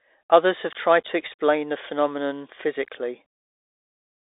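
Throughout, the speech sounds thin and boxy, cut off above 3.8 kHz, with scratchy s sounds and granular hiss from the Bluetooth CVSD headset codec's coarse one-bit coding.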